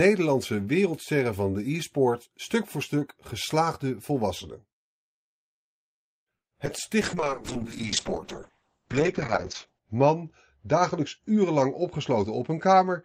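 At 6.37 s the speech stops for about 140 ms, until 6.53 s, in what is likely a call audio freeze: packets held up in transit let the jitter buffer run dry, and the receiver stretched the last sound briefly before falling silent. When delivery resumes, the speech continues from where it left off, so nothing is lost, but the gap adds roughly 140 ms of delay to everything after it.

Two short concealed packet losses follow, at 6.65 s and 6.78 s. In each, about 20 ms of audio failed to reach the decoder in time. The receiver extended the preceding sound for around 10 ms and cross-faded back into real audio. The repairs are tiny, audible as a quick smear or wobble rather than a clear dropout.

From 7.02 s to the end there is a call bitrate drop. The encoder's rate falls from 48 kbps to 7 kbps and stays at the floor for about 2.8 s. Coarser coding makes the speech rough and watery. The audio band also narrows from 20 kHz to 8 kHz, removing the upper sibilance and air, so the voice sounds muffled.

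Between 11.18 s and 12.92 s, a jitter buffer speed-up plays the speech about 7% fast. The buffer had built up more audio than its target, so the receiver repeatedly cut out pitch-period-length slices, totalling roughly a seventh of a second, to reduce the latency. Pitch stays unchanged, but the delivery sounds slightly hurried over that stretch.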